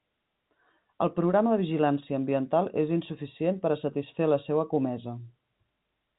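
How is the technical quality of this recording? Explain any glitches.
Nothing here counts as a glitch: the speech comes through the narrow band of ordinary G.711 telephone coding, topping out around 3.8 kHz, with no dropouts, clicks or other faults to point to.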